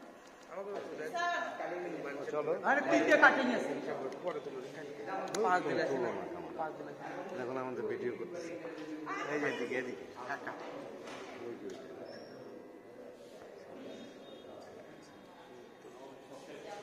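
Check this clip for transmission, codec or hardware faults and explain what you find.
One fault is present. At 0.33 to 0.49 s there are repeated frames. A block of about 157 ms plays twice. That fits a run of six compressed frames being sent again. The decoder replays the same stretch, heard as a stutter. The audio runs 157 ms longer.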